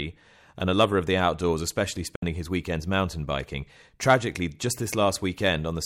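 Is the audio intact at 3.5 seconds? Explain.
Yes, at 3.5 seconds the speech is intact, with no dropout, click, distortion or other fault at that moment.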